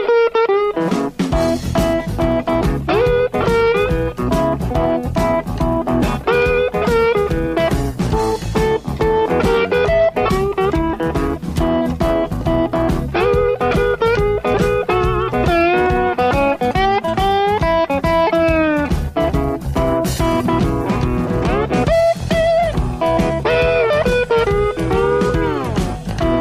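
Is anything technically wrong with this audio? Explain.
No, nothing in the signal points to a technical fault, and the audio holds steady throughout without any audible disturbance to its level, timing or frequency content.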